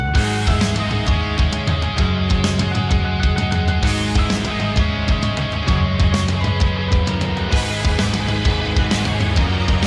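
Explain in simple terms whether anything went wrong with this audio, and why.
Nothing went wrong here: no dropouts, clicks, distortion or level jumps turn up anywhere in the recording.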